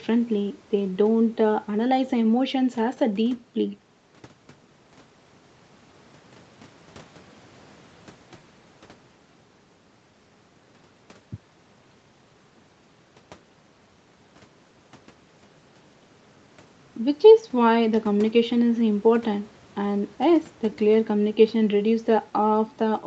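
Nothing here stands out as a fault: the speech comes across as ordinary call audio, with the top end stopping around 8 kHz and the very lowest bass trimmed away, both just what the call's normal processing does.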